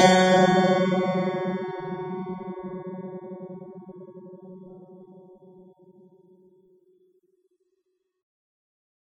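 Likely AAC compression runs through the whole music clip. Nothing is heard above 17.8 kHz, and the spectrum is quantised so coarsely that the sound turns dull and smeared, with fizzy, warbling texture on held tones, which fits a bitrate near 24 kbps.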